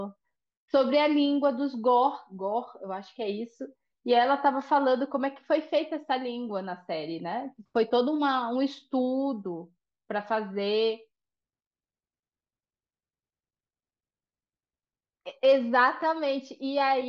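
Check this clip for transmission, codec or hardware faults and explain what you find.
No faults were found.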